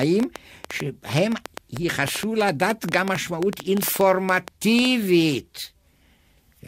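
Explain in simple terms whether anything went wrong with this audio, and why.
From about 0.03 s to 4.86 s, a rapid, uneven ticking runs over the speech, around 7 or 8 sharp clicks a second and roughly forty in all, standing out clearly above the voice. This train of clicks is likely interference from nearby equipment or a faulty connection or power supply.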